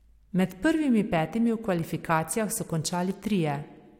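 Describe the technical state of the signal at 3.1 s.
At 3.11 s the speech has an overlap between stream segments. Two segments claim the same few milliseconds, so the player discards about 8 ms of real audio. The waveform jumps across the gap. This is heard as a brief click or tiny skip.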